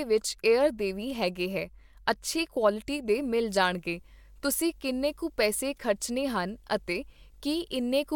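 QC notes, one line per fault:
3.17 s to the end, video or display buzz: a low, steady buzz enters beneath the speech and stays until the clip ends, sitting well below the speech level, with a fizzy hash layered over it and a faint, very high whine at 15.6 kHz. A screen or video cable is coupling into the audio path; the buzz repeats at the 50 Hz picture field rate, and the whine comes from the display's line scanning.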